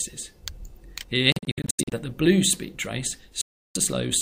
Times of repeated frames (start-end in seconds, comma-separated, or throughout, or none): none